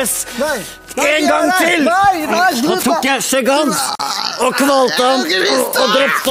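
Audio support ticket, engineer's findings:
Separately encoded pieces joined untrimmed, so encoder delay and end padding remain. Gap at a join of encoded pieces, 3.95–4.00 s: a 43 ms gap with smeared edges, then sound resumes.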